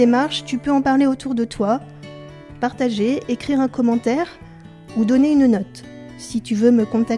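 No audible technical faults.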